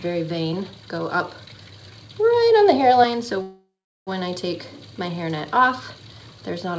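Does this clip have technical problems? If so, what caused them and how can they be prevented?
Yes. From 3.42 to 4.09 s the sound stretches into a fading buzz that drops to silence for about 0.39 s, then resumes where it left off with nothing lost. This is a call audio freeze, likely from packets stalling until the jitter buffer ran dry, which adds about 0.65 s of delay. A steadier network path and a jitter buffer with more headroom would prevent it. The band stops at 8 kHz, which fits a wideband call codec such as G.722.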